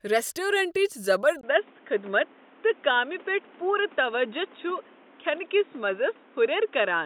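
A speech clip where, at about 1.41 s, the sound drops out for roughly 20 ms and comes back duller and boxier until the end, with nothing above 3.8 kHz and fresh background noise sitting about 30 dB under the voice, though the loudness barely changes. That pattern most likely points to the input switched to a poorer device partway through, such as a headset falling back to its narrowband call profile.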